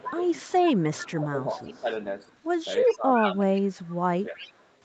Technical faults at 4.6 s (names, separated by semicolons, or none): echo leak